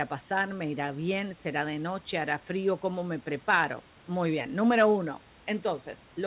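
No technical faults can be heard in the speech, which arrives over a G.711 mu-law call path at 64 kbps with nothing above 4 kHz, as that narrowband codec implies, while the room's background noise sits about 30 dB below the speech.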